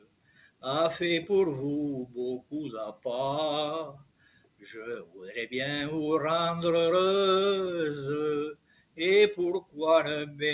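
From the start the level pumps and thins, with held tones and decaying tails sagging while sharp onsets come through at close to full strength. This is a noise suppressor applied to music or sounds. A speech-oriented suppressor was left running and treats sustained, steady material as background noise, pulling its gain down by roughly 15 dB. The sound comes and goes, louder on attacks and duller in between. The narrow, telephone-like band, with nothing above 4 kHz, comes from the call path, which fits a G.711 A-law link at 64 kbps.

Several passages dip noticeably further, each a sound cut by the noise suppressor. From 0.00 to 0.63 s the opening sinks by about 18 dB. From 3.93 to 4.72 s another stretch drops by about 18 dB. At 5.04 to 5.21 s a brief dip reaches about 13 dB, at 8.53 to 8.99 s about 18 dB, and at 9.61 to 9.78 s about 17 dB. In each case the material was judged to be noise and turned down.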